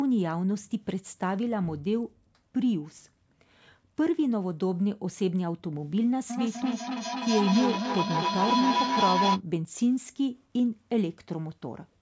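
A speech clip in which, from 6.3 s to 9.43 s, a ringing tone near 1 kHz swells until it sits about 1 dB above the speech, pulsing roughly every third of a second before cutting off. This is feedback howl: a loudspeaker in the same room as a microphone on the call feeds each repeat back with more gain, so the loop narrows onto the frequency it favours and throbs at its round-trip delay until broken. The call's microphone processing limits the audio to nothing above 8 kHz.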